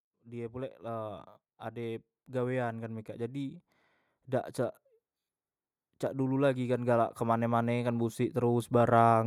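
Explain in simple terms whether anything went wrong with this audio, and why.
Automatic gain rising, from 0.23 to 3.62 seconds and again from 6.15 to 9.22 seconds. In both stretches the recording system decided the speech was too quiet and turned its own volume up little by little over roughly three seconds. Because it boosts everything it picks up, the voice and the background noise swell louder together, so the level creeps upward instead of staying steady.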